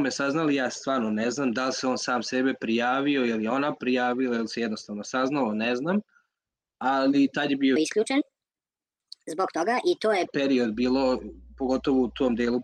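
A section at the wrong speed runs from 7.76 to 10.25 s, playing 1.35 times fast, so pitch rises roughly five semitones and everything sounds hurried, likely from resampling against the wrong clock. Mains hum follows from 10.75 to 12.53 s, a steady 60 Hz tone about 25 dB below the signal, coupled in from the power line through grounding or a nearby transformer.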